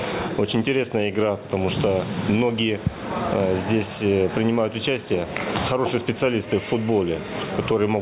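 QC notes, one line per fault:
Throughout, gain pumping: gain swings about 15 dB, squashing dynamics; likely excessive mic gain driving a fast limiter.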